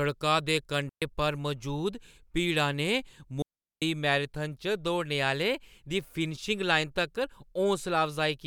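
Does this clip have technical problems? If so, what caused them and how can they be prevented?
Yes, there are two digital wireless dropouts: clean holes of near silence from 0.89 to 1.02 s, just before "पर मजूद भीड़ा", and from 3.42 to 3.82 s, just before "मैराथन च दौड़ने". The receiver lost too much data and muted briefly, with no noise burst. Keep line of sight, shorten transmitter distance, and avoid crowded frequencies.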